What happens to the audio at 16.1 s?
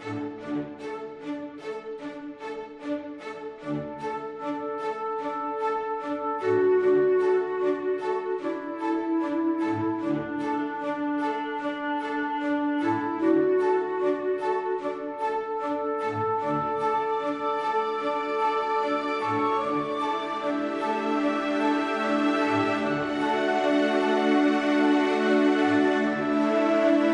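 Nothing goes wrong at 16.1 s; the audio there plays through intact, with no dropout, click or distortion.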